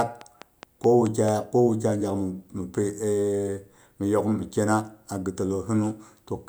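From 0.01 s to 1.29 s a train of clicks runs over the speech: about seven near-identical pulses at a steady 4.7 per second, some standing roughly 10 dB above the signal and audible as sharp ticks even between syllables. The likely cause is electrical interference or a faulty connection or power supply injecting pulses. The regular spacing and matching shape set it apart from random crackle, whose pops vary in size and timing.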